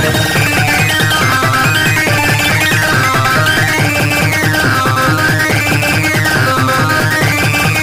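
From start to finish the clip has a wrong sample rate fault. It runs at twice its intended speed and sits a full octave, 12 semitones, too high, which fits material recorded near 22 kHz being played back at 44.1 kHz without conversion.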